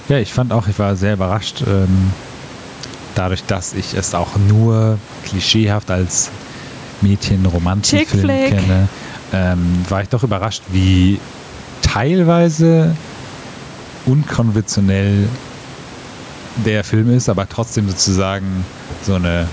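Gain pumping runs throughout: the gain swings roughly 10 dB, likely from excessive input gain driving a fast limiter.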